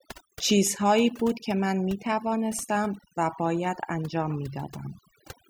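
A noise reduction stage set too aggressively on this speech runs throughout, producing overdone noise removal: bands near its noise estimate are pulled down or switched off, taking quiet voice detail with them. The background drops and breaks up into twinkling specks.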